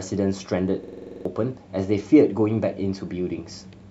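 Speech, with a system hang loop from 0.84 to 1.25 s: one 46 ms fragment repeats exactly nine times at 21.5 Hz, a rapid stutter that fits a 2048-sample ring buffer replaying while the system froze. Unlike packet-loss concealment, the copies are identical and unfaded, and about 0.4 s of audio is lost.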